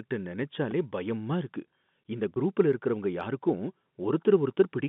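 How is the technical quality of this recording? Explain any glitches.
It's telephone-band speech with two brief glitches, both very short.

At about 0.71 s there's a repeated buffer: a tiny slice of roughly 2.7 ms, which fits a 128-sample buffer, plays three extra times, so you hear a quick click-buzz.

From 2.34 to 2.36 s there's packet loss with pitch repetition: about 20 ms went missing, and the receiver looped the last pitch cycle, giving a slightly held, buzzy moment.

The G.711 phone coding behind it all keeps things within roughly 150 Hz to 3.6 kHz.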